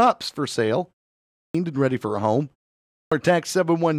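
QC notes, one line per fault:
1.37 s and 2.93 s, clipped start after a pause: the output device dozes during silences of about 0.5 s, so roughly 175 ms and 186 ms of onset are lost. Speech starts abruptly.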